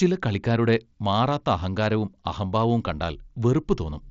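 At 2.86 s, just after "കളിക്കാരുടെ മാറാത്ത അഹങ്കാരവും അഹംഭാവവും", there is concealed Bluetooth headset packet loss. The gap fits a single lost packet of about 7.5 ms between headset and phone. The receiver filled it by repeating the best-matching stretch of recent speech, so the waveform carries on without a break. Because only one packet went missing, the patch is nearly hidden. The mSBC wideband link itself shows its usual light graininess.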